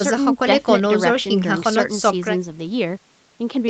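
Nothing goes wrong in this speech recording; it just carries the ordinary character of a call, with the lowest bass trimmed by the microphone processing and the top end stopping at about 8 kHz, which fits an Opus codec on a typical WebRTC call path.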